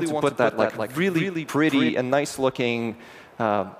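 From the very start until 1.9 s, a doubled audio track is heard: a second, full-band copy of the sound trails the original by about a fifth of a second, roughly 5 dB quieter. The likely cause is the audio being captured again through a slower path and mixed back in. Unlike an echo or reverberation, the copy occurs once, carries no decay or room colour, and stops abruptly at 1.9 s.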